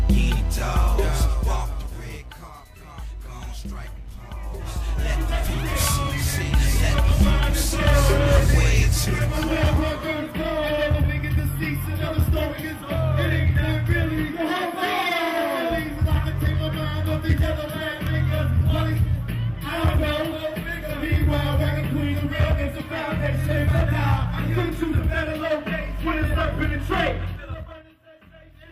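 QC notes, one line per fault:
27.22–27.90 s, zipper noise: the level falls by roughly 20 dB in jumps of about 3 dB, about ten a second, with no smoothing between them. Each jump is an abrupt gain change that clicks, so a ticking rides on the sound as it drops.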